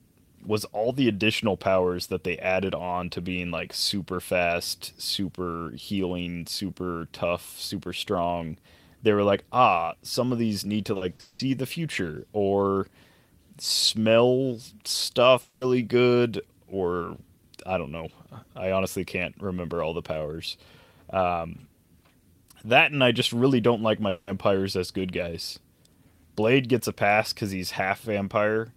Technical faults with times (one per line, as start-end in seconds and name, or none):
10.93-11.41 repeated packet loss (robotic sound)
15.41-15.63 long network dropout
24.09-24.29 long network dropout